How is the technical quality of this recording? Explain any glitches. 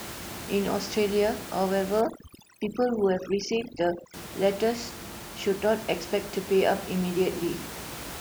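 The recording has one clear glitch: a stretch of overdone noise removal from about 2.01 to 4.14 s. The room noise sits about 13 dB under the speech, and in that window a noise reduction stage gets far too aggressive with it. Any frequency band that comes close to its noise estimate gets pushed way down or switched off. The background drops and breaks up into little twinkling specks, and the quieter parts of the voice get stripped along with it until it recovers.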